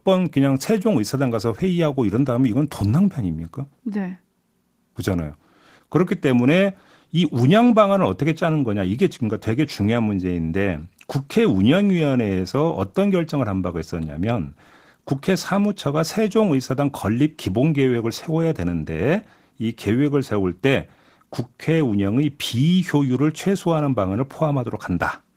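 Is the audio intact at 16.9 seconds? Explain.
No. At 16.9 seconds, as across the whole clip, the speech carries plainly audible Opus voice compression damage. The sound points to Opus in hybrid mode at around 16 kbps, with a linear-prediction coder handling the band below 8 kHz and a transform layer thinly covering the range above. With so few bits, the excitation is coded coarsely, so the voice sounds hoarse, slightly robotic and muffled.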